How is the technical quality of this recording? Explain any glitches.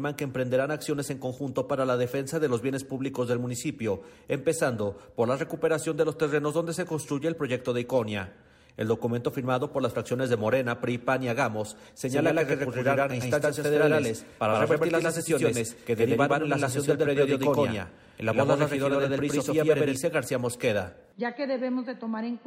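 From 12.08 s to 19.96 s the recording is marred by a doubled audio track. Everything in that stretch is heard twice, a second, equally loud copy trailing roughly a tenth of a second behind, giving a flat, stuttering slapback with no reverb tail or room colour. The echo appears and disappears abruptly at those points. The likely cause is the same signal being picked up again through a slower path, or two out-of-step copies left in an edit.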